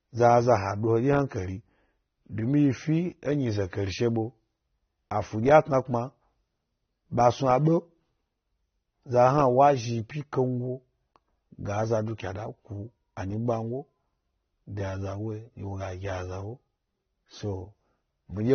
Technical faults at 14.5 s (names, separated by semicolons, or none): AAC compression